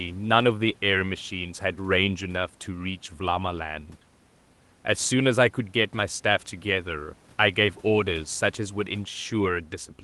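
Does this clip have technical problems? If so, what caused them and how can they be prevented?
No, the speech comes through a call codec path that passes content up to about 12 kHz, with the room's background noise sitting about 35 dB below the speech and nothing in the signal pointing to a technical problem.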